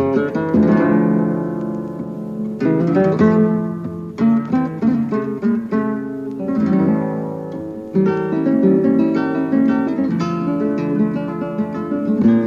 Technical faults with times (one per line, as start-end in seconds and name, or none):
9.86 compressed frames skipped
11.27 compressed frames skipped